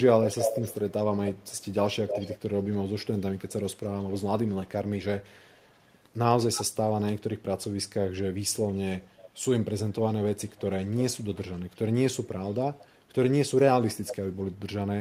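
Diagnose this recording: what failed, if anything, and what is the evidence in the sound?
Echo leak at 0.24–2.77, 3.17–4.68, 5.23–6.0, 6.54–6.87, 10.48–11.77, 12.48–12.9 and 14.07–14.48 s: a delayed copy of the speech returns 306 to 322 ms late, from nearly as loud as the speech to barely audible. In call processing, a far-end loudspeaker's echo canceller likely let its microphone pickup through.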